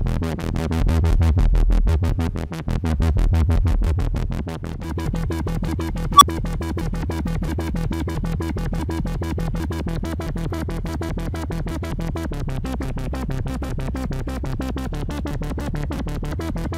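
At 6.15 s an unstable filter runs away: a tone of around 1 kHz swells over roughly 59 ms into clipping, then the recursive filter's output overflows and the sound drops out for about 8 ms before the filter resets, ending at 6.22 s.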